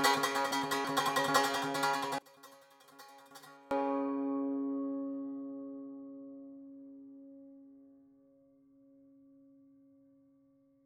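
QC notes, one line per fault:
2.18 to 3.71 s, one channel inverted: for about a second and a half the music caves in, dropping by about 26 dB when heard summed to mono, so the centre of the mix all but disappears and you're left with a faint ghost of it. That's most likely one side flipping polarity: everything shared between left and right cancels out, and only the stereo difference survives until the normal sound comes back.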